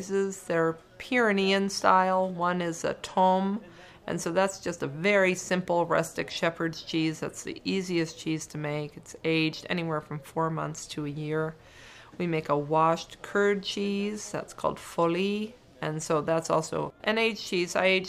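No technical faults are audible.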